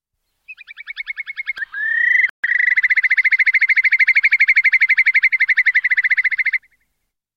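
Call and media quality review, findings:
Playback stall, 2.29 to 2.44 s: output drops to silence for about 143 ms mid-flow. Likely player buffer underrun or blocked audio thread.

Time-compressed catch-up, 2.44 to 2.72 s: audio hurried at 1.5x, pitch unchanged. Player cutting and cross-fading small segments to drain backlog.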